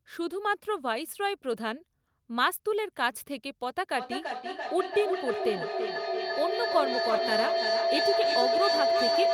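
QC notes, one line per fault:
3.97 s to the end: feedback howl. Each trip round the microphone-to-loudspeaker loop adds level, so the repeats grow and narrow to a tone near 700 Hz, pulsing roughly every 300 ms and peaking about 1 dB above the speech. On a spectrogram it is a single bright horizontal band, and the waveform swells into a pulsing envelope.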